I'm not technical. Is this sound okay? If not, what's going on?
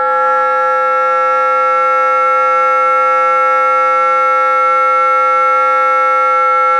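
Yes, this sound is fine, with nothing going wrong anywhere in it that you'd need to worry about.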